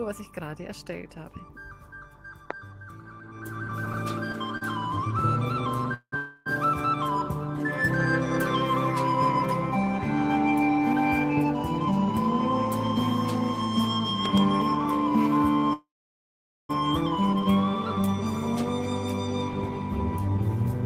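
A loud pop at 2.51 s is a single sharp click about 15 dB above the surrounding sound, most likely a voltage spike from a plug, switch or static discharge entering the signal path while the audio continues underneath.

Repeated stalls (stutter) run from 3.67 to 6.14 s. Packets arrived late seven times, draining the jitter buffer, and each time the receiver stretched the last sound to bridge the wait. Together the gaps add 0.28 s, the longest 182 ms. Nothing is lost, but the audio drags and hitches.

A call audio freeze follows at 6.16 to 6.48 s. The receiver extends the last sound as a fading buzz or hiss for 295 ms, likely because packets were held up in transit, then resumes where it stopped.

Jitter buffer speed-up at 11.39 to 12.40 s runs the audio at 104% speed. About 50 ms is cut as tiny pitch-period slices to shrink a backlog of queued audio, at unchanged pitch.

Two loud pops in quick succession between 14.26 and 14.40 s each reach about 15 dB above the signal, likely from an electrical transient, with the sound carrying on beneath them.

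A second call audio freeze at 15.73 to 16.71 s is longer. After a brief fading continuation, 0.83 s of silence fills most of the 0.96 s wait, likely while delayed packets were held up, and the audio then picks up intact.

Further jitter buffer speed-ups at 17.99 to 18.21 s (115%, about 40 ms removed) and 20.21 to 20.74 s (111%, about 70 ms removed) audibly rush the sound as the buffer sheds excess delay.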